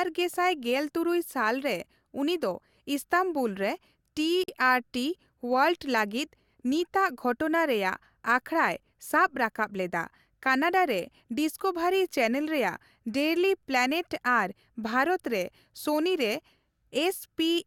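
Separately encoded pieces joined untrimmed leave a gap at a join of encoded pieces: a 47 ms gap, 4.44 to 4.48 s, before speech resumes.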